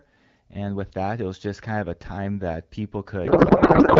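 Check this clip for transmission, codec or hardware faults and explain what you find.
There's one real problem, and it's right at the tail. From about 3.25 s through to the end, the speech collapses into a garbled, warbling noise that barely tracks the speech: a codec payload misread. The decoder is getting AMR frames that look valid, but it's unpacking the bits with the fields in the wrong spots. The pattern fits octet-aligned AMR being read as bandwidth-efficient, so everything decodes into nonsense. Up to that point the AMR wideband (HD Voice) codec at 12.65 kbit/s comes through clear, with only light coding damage.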